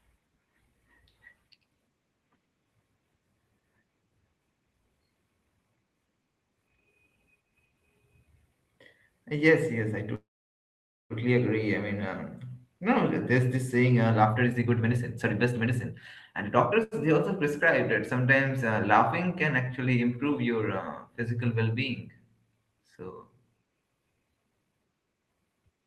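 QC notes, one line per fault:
10.15–11.13 s, call audio freeze: after "yes I" the sound stops for about 0.95 s, a brief fading tail and then roughly 0.87 s of silence, before resuming with "agree I mean um". Nothing is lost, so the likely cause is delayed packets draining the jitter buffer.
14.23–16.79 s and 24.18–25.34 s, jitter buffer speed-up: after "this saying uh" the speech runs at about 131% speed with unchanged pitch, and near the end at about 121%. The receiver trimmed pitch-period slices, around 0.7 s and 0.3 s in total, to shrink an overfull buffer, so delivery sounds hurried.
16.83–16.94 s, short stall from a late packet: just before "they also prescribe that" a sound is held about 82 ms too long with a slight buzz or dip. A packet missed its slot, and the receiver stretched the last audio until it arrived. Nothing is skipped.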